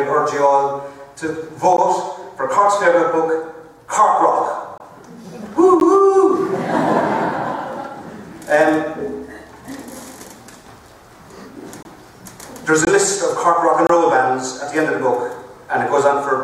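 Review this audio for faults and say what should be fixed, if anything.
Six gaps between stream segments break in at 1.77 s, 4.78–4.80 s, 5.80 s, 11.83–11.85 s, 12.85–12.87 s and 13.87–13.89 s. Each is a hard-edged silence of 12 to 26 ms. They fall on one-second segment boundaries. The timestamps there leave small holes, and the player fills them with silence. Aligning the segment timestamps so each segment starts exactly where the previous one ends would prevent it.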